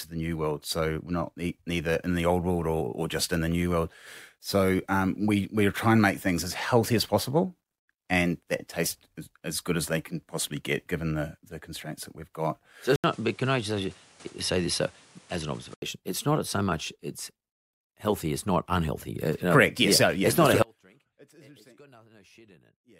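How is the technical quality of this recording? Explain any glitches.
The recording has two technical faults in its second half: a stretch of reduced bandwidth with a different noise floor, and a dropout that runs to the end.

From 12.96 to 15.82 s, the sound goes briefly silent for about 80 ms, then loses everything above 11.4 kHz and takes on a new background noise roughly 30 dB below the speech, with no real change in level. This points to the input likely having switched to a poorer device, whose narrower passband and own noise replace the original microphone's character until the path returns.

At 20.63 s, just after "not a", the speech cuts out abruptly and does not come back before the clip ends. What remains is a faint sound around 35 dB below the normal speech level. This is an audio dropout to a faint residue: the wanted signal was likely lost upstream while the later stages of the chain stayed live, passing only this low-level leftover rather than true silence or a fade.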